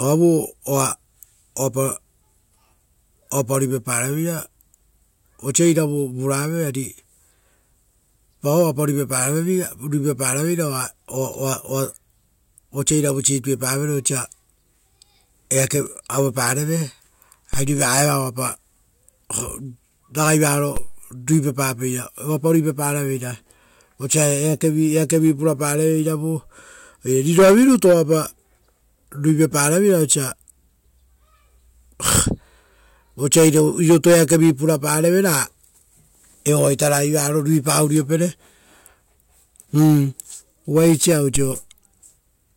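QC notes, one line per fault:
17.54 s, 20.77 s and 41.36 s, DC step: the waveform's zero line jumps suddenly by about -13 dBFS at the first two and about -15 dBFS at the last, then drains back through a roughly 2 Hz high-pass. Each jump sounds as a brief low thump under the speech, which continues unaffected.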